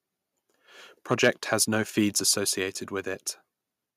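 It's a short speech clip, and between 1.11 and 1.62 s you get microphone overload: the loudest syllables turn harsh and crackly because their peaks are being flattened. The input is likely set too high, pushing about 5 dB past the converter's ceiling, so around one percent of the samples get squared off there. Then at 2.25 s there's a microphone volume stepped down moment, where voice and background drop together by about 3 dB in one go. That's likely the call software noticing the earlier clipping and cutting the device's input level in a single step.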